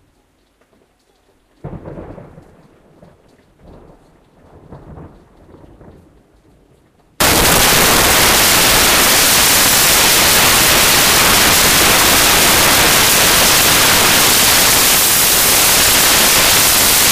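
Sounds. From 7.20 s to the end, samples are built from the wrong bytes. Misordered bytes turn low bits into loud, harsh broadband noise, close to white on loud sounds.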